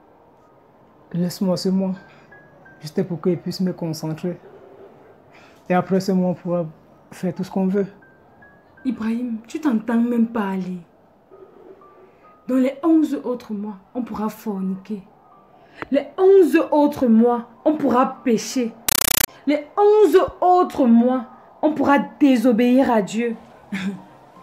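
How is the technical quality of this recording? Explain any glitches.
One glitch stands out. From 18.89 to 19.28 s, harsh chattering static replaces the sound, in 8 ms bursts 31 times a second. This is a compressed stream played as audio: undecoded AC-3 data treated as ordinary samples.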